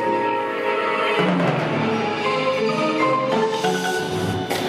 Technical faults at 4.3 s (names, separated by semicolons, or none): compressed frames skipped